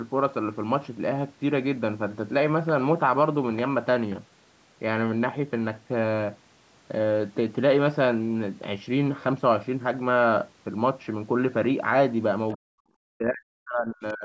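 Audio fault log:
12.51–12.57 s, other side's voice leaking through. A brief scrap of a second voice appears, faint and well below the talker. It lasts only a few hundredths of a second. The likely cause is the loudspeaker playing the far end into the microphone, with the echo canceller leaving a small residue. That residue slips through just before the main voice is pushed down.
12.55–12.87 s and 13.17–14.25 s, speech suppressed in double talk. The talker's voice drops sharply, nearly to silence at its deepest. The first dip lasts about a third of a second. The second covers about a second, running to the end of the clip. The likely cause is both sides talking at once. The echo canceller could not tell the near voice from the far-end echo, so it turned everything down together.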